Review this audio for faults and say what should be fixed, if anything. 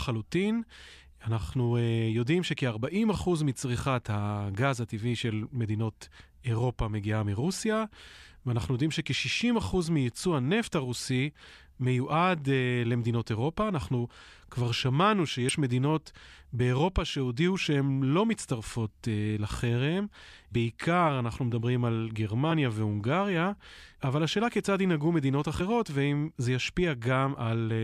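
Five short glitches in the speech come from damaged data in the compressed stream, at 10.64, 15.49, 18.56 to 18.58, 22.50 and 25.59 s. Corrupted bytes make the decoder misread those frames and lose sync until it finds the next valid frame header, so a brief glitch replaces the speech. On a spectrogram each appears as a thin vertical disruption; the waveform shows a sudden discontinuity. To prevent it, carry the stream over a checksummed, error-protected transport and verify file integrity before decoding.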